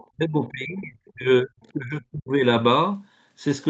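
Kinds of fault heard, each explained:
Other side's voice leaking through: Faint scraps of a second voice appear from 0.00 to 0.07 s and again from 1.07 to 1.12 s, some 30 to 35 dB below the main talker. This is likely loudspeaker sound that the echo canceller failed to fully remove from the microphone.
Speech suppressed in double talk: Between 0.15 and 2.44 s the talker's level sinks and breaks up, with a deep drop of around 35 dB and about two seconds affected. Likely cause: the echo canceller mistook simultaneous talk for echo and attenuated both.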